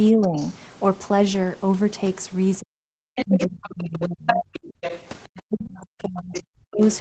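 Speech suppressed in double talk at 0.12 to 0.36 s dips the talker by about 15 dB. The likely cause is an echo canceller that could not separate the near talker from loudspeaker echo while both sides spoke, so it turned everything down. The other side's voice leaking through follows faintly at 0.22 to 0.55 s, about 25 dB below the speech, as scraps the canceller likely left in the microphone signal. Suppression returns at 2.6 to 2.87 s, cutting the talker almost completely, about 40 dB down. From 3.16 to 5.0 s the leaking voice is strong, only about 5 dB under the speech, and it overlaps a long suppression from 3.24 to 4.42 s, where about a second of the talker is turned down by up to about 35 dB. A brief scrap of leakage comes at 5.37 to 5.42 s. Suppression then holds from 5.49 s to the end, reaching about 40 dB, with another leaked fragment at 6.34 to 6.42 s, about 15 dB below the speech. 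Throughout, the call path's Opus coding at 20 kbps limits the audio to nothing above 8 kHz.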